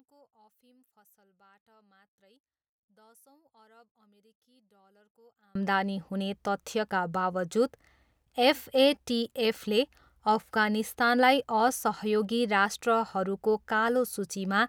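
From the start to 5.55 s the speech nearly disappears in mono, down about 36 dB to a faint residue, before full level returns at "हुने तथ्यका". The likely cause is one channel inverted: reversed polarity cancels the centred voice when summed.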